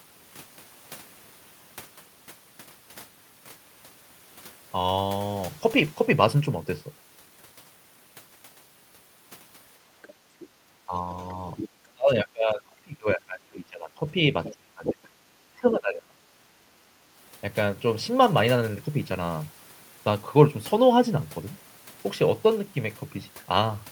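Other side's voice leaking through first appears from 10.02 to 10.47 s, a faint second voice about 25 dB under the talker, likely loudspeaker playback the echo canceller failed to remove. Background gated by the echo canceller overlaps it from 10.19 to 10.58 s: the canceller clamps the microphone while the loudspeaker plays, so the room sound dips by up to about 8 dB for roughly a third of a second. Speech suppressed in double talk follows from 10.86 to 11.44 s, the talker dipping by around 10 dB. The leak returns stronger at 11.57 to 11.69 s, about 10 dB below the speech. A long suppression runs from 11.9 to 14.09 s, with the voice losing up to around 25 dB across about two seconds. A third leak from 14.44 to 14.93 s sits only about 5 dB under the talker. A final suppression from 14.51 to 16.21 s cuts the voice by up to around 25 dB again. During these stretches, the canceller likely heard both sides at once, could not separate them, and turned both down.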